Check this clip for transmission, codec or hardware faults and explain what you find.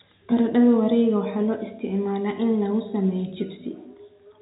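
No transmission, codec or hardware faults turn up: the speech arrives intact through G.711 telephone coding, with its band ending at 4 kHz and only the faint quantisation noise of that format riding along with the voice's level.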